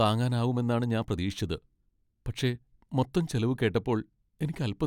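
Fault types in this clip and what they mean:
Overlap between stream segments: chunk timestamps overlapped, so the player cut a few milliseconds of speech, leaving tiny skips at 1.02 and 3.03 s, two seconds apart.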